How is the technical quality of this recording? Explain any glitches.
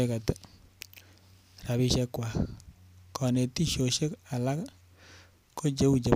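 The recording has one recurring glitch. Clock drift buffer slips produce about four clicks, roughly every 1.54 s from 1.0 s to 5.62 s, likely from two devices drifting around 200 ppm apart, each slip dropping or repeating a handful of samples.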